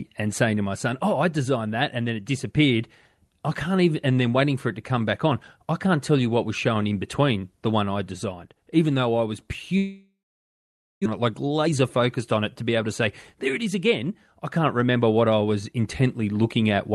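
Speech carried over a call path that sounds like Opus at around 32 kbps, with content cut off above 12 kHz. From 9.77 to 11.08 s the sound smears into a fading buzz, then about 0.88 s of near-silence, and resumes with roughly a second of material missing. This is likely a long network dropout, where the receiver concealed the gap before giving up. Afterward, a jitter buffer speed-up works off the backlog of about 0.2 s. From 11.19 to 12.89 s the speech runs about 12% fast at unchanged pitch and sounds hurried. From 13.37 to 14.11 s a milder 5% speed-up trims roughly 40 ms more.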